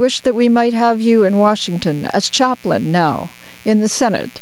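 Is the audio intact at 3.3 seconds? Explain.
No. Mains buzz runs throughout, including 3.3 seconds: switching spikes twice per 60 Hz cycle add a raspy harmonic buzz roughly 35 dB below the speech. Gain pumping also persists throughout, likely from excessive gain feeding a fast limiter, so the gain swings by roughly 10 dB and loud and soft parts end up squashed closer in level.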